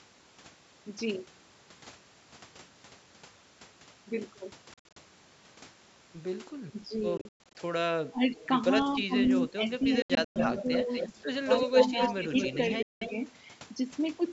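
At 4.74 to 4.97 s, the speech breaks into abrupt silent gaps. This is a Bluetooth dropout, likely from packets arriving too late. About 150 ms goes missing.

From 6.71 to 6.91 s the speech dips briefly. This is speech suppressed in double talk. The canceller likely mistook it for echo and turned it down.

Further Bluetooth dropout gaps cut 7.17 to 7.55 s.

The speech dips again at 8.10 to 8.25 s, by about 20 dB.

An echo leak follows at 8.34 to 8.48 s. It is a faint copy about 278 ms late, likely echo the canceller missed.

Suppression returns at 8.97 to 9.70 s. Inside it, another faint echo scrap appears at 9.24 to 9.29 s.

From 9.81 to 13.34 s a strong echo runs 246 ms behind the speech, only about 5 dB down.

Within that stretch, more dropout gaps hit 10.02 to 10.36 s and 12.83 to 13.02 s. The speech resumes as if it had played on.

Double-talk dips recur at 10.63 to 10.89 s and 11.67 to 12.59 s, the later one shallow, about 5 dB.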